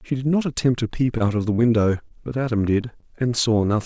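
A speech recording with short concealed packet loss at 1.18, 1.56, 2.08, 2.81 and 3.00 s. Each time about 20 ms of audio went missing and was filled by extending the preceding sound. Unlike a plain dropout, there is no silent gap, only a brief smear or wobble. The call path's G.722 coding leaves nothing above 8 kHz.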